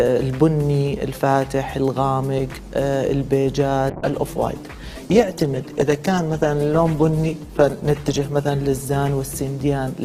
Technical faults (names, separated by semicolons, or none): call bitrate drop